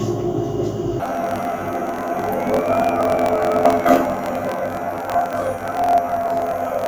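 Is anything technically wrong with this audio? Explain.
Yes. From 1.00 s to the end, the sound turns into a robotic buzz pulsing at about 43.1 Hz. Each 23.22 ms block plays twice at double speed, first one channel and then the other, an octave up. This is planar audio read as interleaved, consistent with 1024-sample blocks.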